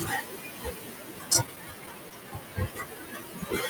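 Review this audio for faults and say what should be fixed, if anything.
Noise suppressor artifacts run through the whole clip. The suppressor lowers whichever frequency bands it judges to be steady background, frame by frame, so the room noise, about 13 dB below the speech, dips in the pauses and swells under the speech. Preventing this means using a gentler suppression setting, or reducing the room noise at the microphone so less suppression is needed.

Speech cut by the noise suppressor also spans the full clip, from 0.00 to 3.70 s. The suppressor mistakes quieter parts of the speech for noise and turns them down with the background, by about 18 dB at the deepest point, so soft consonants and word endings sound swallowed or faint. Preventing this means giving the suppressor better voice-activity detection or a limit on its maximum attenuation so speech components are not pulled down.

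Repeated stalls (stutter) occur between 1.33 and 2.24 s. The jitter buffer ran empty again and again, producing six brief stalls, the longest about 13 ms. Each time, the receiver stretched the last sound until the next audio arrived, so nothing is lost, but the passage drags and stutters. Preventing this means using a larger or more adaptive jitter buffer, and steadier packet delivery on the network path.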